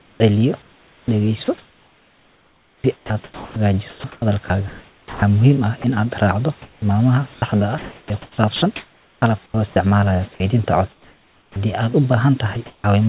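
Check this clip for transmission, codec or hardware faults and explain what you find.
Sound chopped by the voice detector shows up twice. From 0.0 to 11.56 s, about 5.3 s of the audio is swapped out in pieces, and from 12.54 to 12.84 s another 200 ms goes. The likely cause is the sender's voice detector repeatedly deciding the signal had stopped, muting it and sending comfort-noise frames instead. Quieter syllables and word edges vanish, and the room noise sits about 33 dB below the speech. Unlike packet loss, the gaps are neither silent nor filled with repeated fragments. They hold steady noise matched to the room, and the band-limit stays at the 4 kHz ceiling of the G.711 call path throughout.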